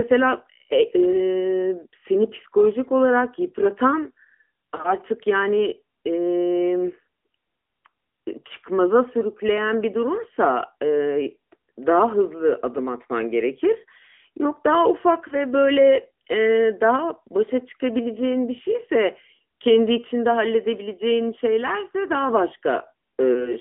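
AMR narrowband mobile codec, throughout: the speech sits in a narrow telephone band of roughly 200 Hz to 3.4 kHz, with nothing above. The vocal-tract model rebuilds each frame from a few pulses, leaving a plainly audible buzzy, synthetic edge that fits a 10.2 kbps mode.

Lost AMR speech frames, at 4.76 to 4.85 s and 15.28 to 15.34 s: each is a brief dip or warble. A frame failed its checksum, and the decoder covered the roughly 20 ms gap by reusing the previous pitch and vocal-tract settings at reduced gain, which fits a single lost frame.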